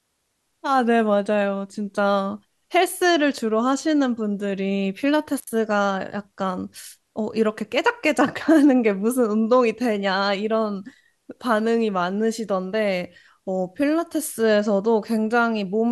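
At 5.38 s an intermittent contact in the cable or plug briefly opens and the signal path breaks for about 72 ms, until 5.47 s. The speech drops out abruptly, crackle marks both edges of the gap, and only faint hiss remains while the line is open.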